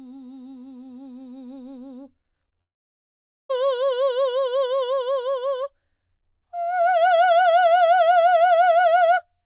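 In this music clip, heard through a call path that carries nothing above 4 kHz, a quick smear lands at 2.46 s and again at 2.49 s. These are two short concealed packet losses: about 20 ms of audio each time never arrived, and the receiver covered each gap by extending the preceding sound before blending back in. From 2.62 s to 3.51 s the music drops to near silence for almost 0.9 s, then returns further along without the missing passage. The cause is likely a long network dropout, with concealment too brief to bridge it.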